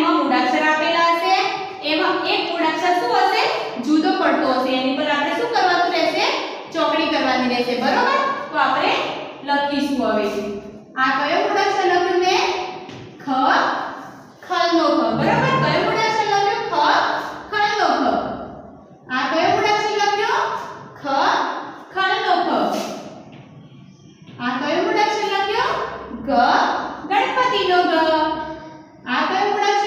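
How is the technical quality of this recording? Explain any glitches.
No technical glitches turn up anywhere in the recording. Nothing interrupts or disturbs the audio at any point.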